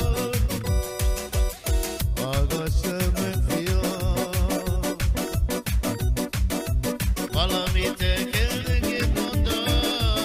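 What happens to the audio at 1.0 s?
Nothing goes wrong at 1.0 s; the audio runs through that moment intact, with no dropout, click or other fault.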